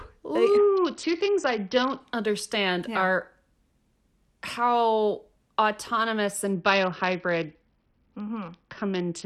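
From 0.57 to 2.00 s, and again from 6.54 s to the end at 9.25 s, the speech goes dull and gritty: a Bluetooth SBC bit pool drop. The link starved the encoder, which fits the bit pool falling from 31 to 7, near 61 kbps. Upper sub-bands lost their bits, so on a spectrogram the treble empties into a hard ceiling, while coarse quantisation spreads a grainy noise floor through what remains.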